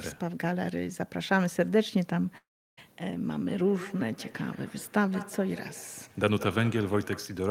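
A long network dropout runs from 2.37 to 2.79 s. The sound smears into a fading buzz and then about 330 ms of silence, likely because packets stopped arriving. Feedback echo between two devices follows from 3.32 to 7.48 s. Each stretch of speech returns roughly every fifth of a second, thinner and ringing, up to about 15 dB below the speech.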